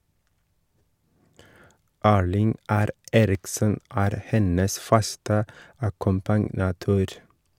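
No technical faults can be heard in the recording at any point.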